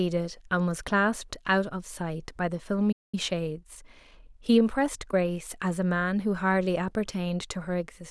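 Playback stall, 2.92 to 3.15 s: the speech cuts out mid-flow for about 0.21 s of silence, then resumes where it stopped. The likely cause is the player running dry of buffered data, or its thread being held up, until output could restart.

Time-compressed catch-up, 3.15 to 5.23 s: immediately after the gap, the speech runs about 1.1 times faster at unchanged pitch. The player is trimming its backlog by removing small slices and cross-fading the joins, which leaves the delivery hurried.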